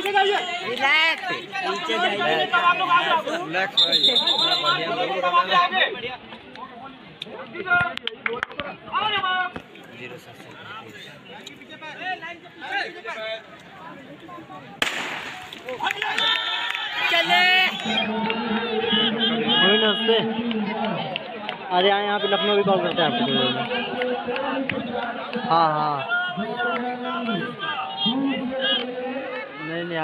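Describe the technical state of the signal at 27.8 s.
Time-stretched section, 25.53 s to the end at 30.04 s: the sound is slowed to about 0.68 times its pace at unchanged pitch, dragging, likely from software repeating short pieces.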